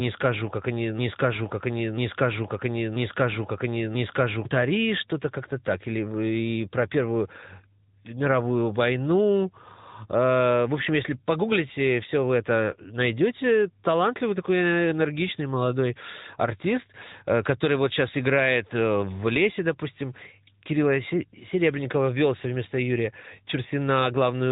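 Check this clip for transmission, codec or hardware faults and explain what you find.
Two faults here: a mobile-codec sound across the whole clip, plus a stuck loop at the very start.

From 0 to 4.45 s there's a broken-record loop, already going when the clip opens. A chunk of about 0.99 s repeats back to back four times, likely because the stream stalled and kept resending its last buffer, so the real speech from that stretch is gone.

Throughout, it's AMR narrowband mobile codec. Nothing passes above 3.8 kHz, and the voice is plainly buzzy and synthetic, which fits AMR-NB running at around 10.2 kbps.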